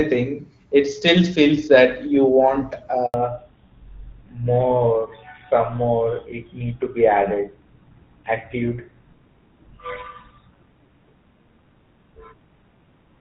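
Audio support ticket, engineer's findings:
Handover gap, 3.06–3.14 s, just after "feels that you want": during the network switch no speech frames arrived for 80 ms, so the audio cuts out to silence and that stretch is lost.

Fallback to narrowband, 3.14 s to end: the call dropped out of HD Voice into a narrowband codec, most likely GSM full rate. Nothing is heard above 4 kHz, and the sound turns duller and rougher.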